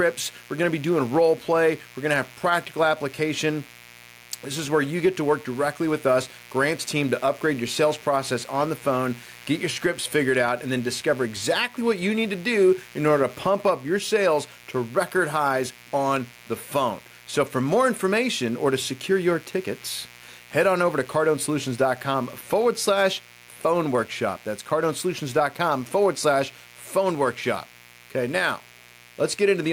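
Mains buzz runs under the speech from start to finish. It sits at roughly 25 dB below the speech. Its base is the 60 Hz mains frequency. Something in the supply path lets sharp switching spikes through, twice in every mains cycle. A dimmer, a rectifier or a missing shield could do this. The spikes build a stack of harmonics of 60 Hz reaching up to several kilohertz. The result is a steady, raspy buzz.

Gain pumping is also present throughout. The level of the speech rises and falls by around 5 dB. It ducks under loud sounds and swells back in the gaps. Loud and soft parts end up closer together, and the sound feels squashed. The likely cause is input gain set far too high for the microphone. A fast limiter or compressor then pulls the gain down on each loud sound and releases it afterwards.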